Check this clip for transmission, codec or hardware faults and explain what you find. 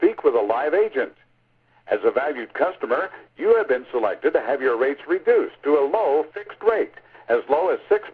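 Nothing wrong can be heard anywhere in this audio.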